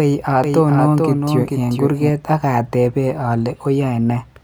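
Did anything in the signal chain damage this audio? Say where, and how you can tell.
Yes. A doubled audio track runs from 0.44 to 2.10 s: a copy about 5 dB quieter trails by roughly 400 ms, likely from a slower second capture path. The spectrogram shows undecayed, shifted repeats that stop abruptly.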